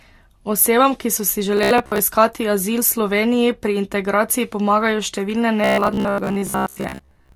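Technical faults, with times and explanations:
throughout: transcoding between lossy codecs. Two kinds of coding damage overlap, with each codec's artefacts heard together. The likely cause is a chain of a low-rate Vorbis stage followed by AAC-LC, and the sound points to rates near 48 and 64 kbit/s. A single encode would leave one consistent artefact signature, not two layered ones.
1.57–1.99 s and 5.64–7.35 s: robotic sound from repeated short buffers. After "ki so si" and again after "pri integraciji pomagajo številne", the sound turns into a rigid metallic buzz fixed at 66.7 Hz. That pitch fits a buffer of roughly 15 ms being replayed, likely because fresh audio arrived too late. About half of the first stretch and most of the second is repeated material. Unlike a plain dropout or stutter, the sound never goes silent, and it still loosely follows the speech.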